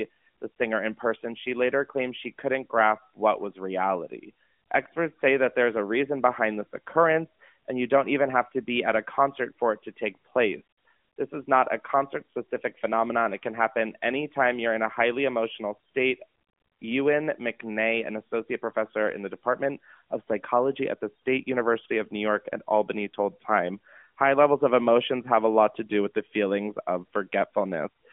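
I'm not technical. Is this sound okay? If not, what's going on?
Yes, no faults; the speech simply has the narrow, phone-call sound of the AMR narrowband mobile codec, with nothing above about 3.7 kHz.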